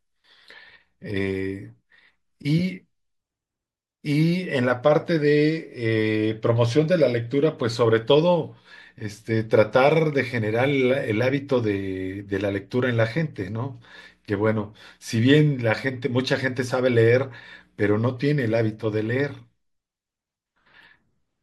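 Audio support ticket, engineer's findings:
Speech signal examined in full, with no audible defect found anywhere along the capture, transmission or playback path, so no fault is recorded for this ticket.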